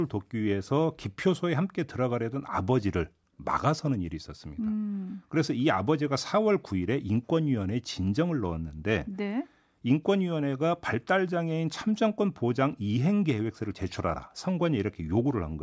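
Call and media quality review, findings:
Nothing to flag on this speech recording; no audible faults turned up anywhere in the listen.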